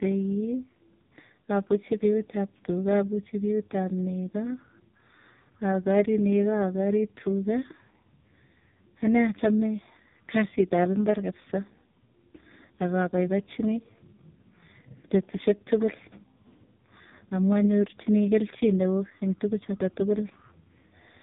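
From start to finish the speech carries AMR narrowband mobile codec damage, heavy and buzzy, which fits the lowest 4.75 kbps mode. A spectrogram shows nothing above 3.8 kHz and smeared, synthetic-looking formant bands rebuilt from sparse pulses in 20 ms frames.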